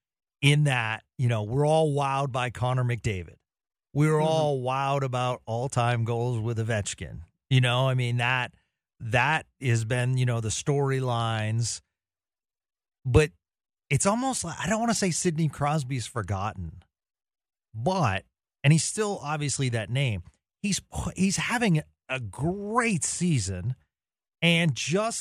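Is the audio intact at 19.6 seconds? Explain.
Yes, the audio is intact at 19.6 seconds, with no audible fault at that point.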